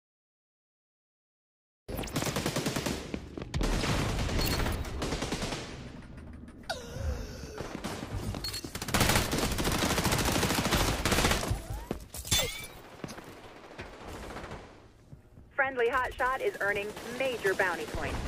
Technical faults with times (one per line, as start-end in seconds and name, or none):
0.00-1.89 cut-off start